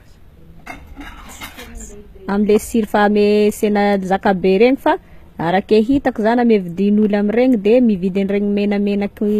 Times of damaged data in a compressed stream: none

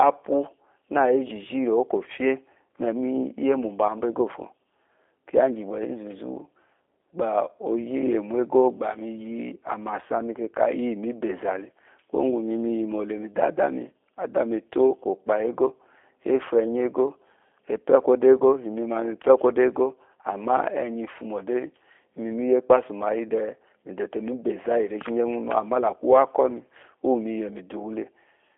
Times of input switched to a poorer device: none

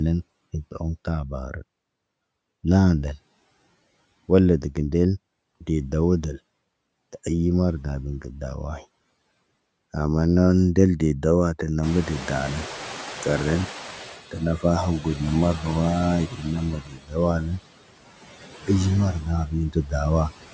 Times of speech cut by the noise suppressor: 16.81-17.16

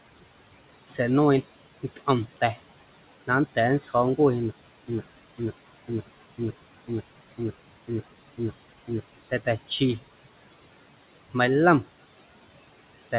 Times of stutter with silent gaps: 4.51-9.00

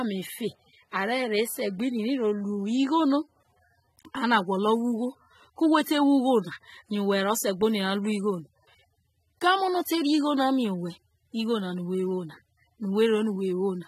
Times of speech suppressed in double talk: none

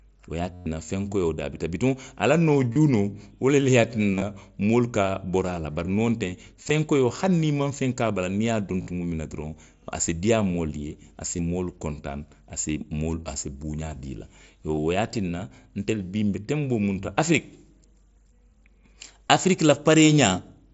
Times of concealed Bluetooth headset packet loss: 0.54-0.66, 2.73-2.76, 4.12-4.22, 6.63-6.70, 8.82-8.87, 11.37-11.39, 14.75-14.77, 19.29

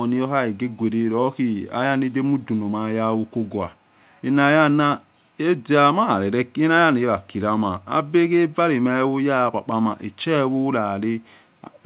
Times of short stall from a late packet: none

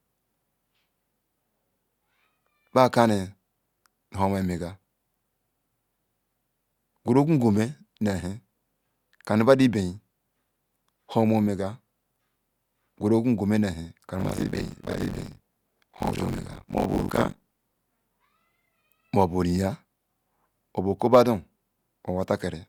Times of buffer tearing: 14.19-17.78

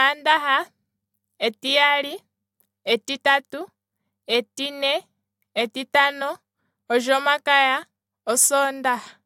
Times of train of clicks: none

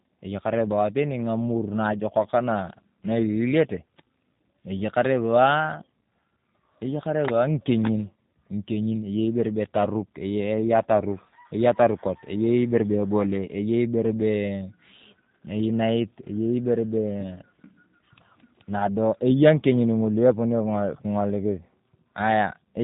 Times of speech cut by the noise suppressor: none

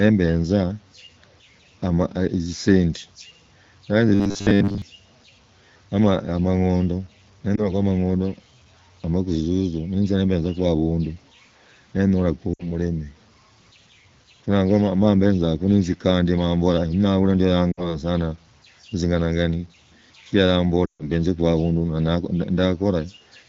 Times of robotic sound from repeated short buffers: 4.09-4.82

